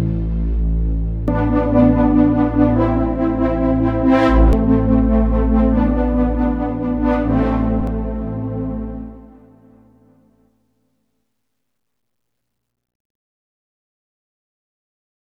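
Damaged data in a compressed stream shows up at 1.28 s, again at 4.53 s, and once more from 7.81 to 7.88 s. In each spot, some of the encoded bytes are wrong, so the decoder misreads the frames there, loses sync, and has to hunt for the next valid frame header before normal playback resumes. The first two are brief blips, and the third lasts about 70 ms; each is heard as a chirp, squawk, click or short hole.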